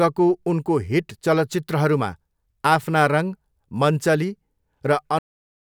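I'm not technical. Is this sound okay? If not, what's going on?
No. This is a cut-off end: the final stretch of recorded audio was never saved or played, so the speech stops abruptly at 5.19 s, mid-sound. Instead of fading naturally, it drops straight to dead silence for the last half second.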